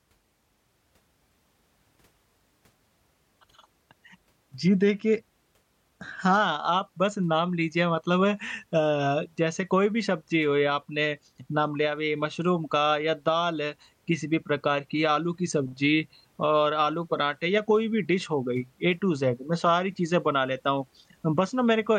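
No dropouts, clipping, glitches or other technical faults turn up anywhere in the recording.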